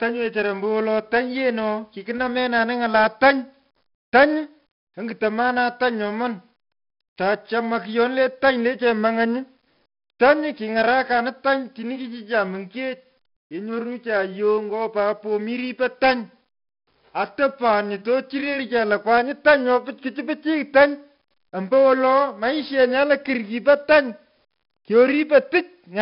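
Throughout, heavy 4-bit ADPCM compression quantises each sample coarsely, adding gritty level-following hiss and rough attacks, with nothing above 5.3 kHz, which fits roughly 44 kbps.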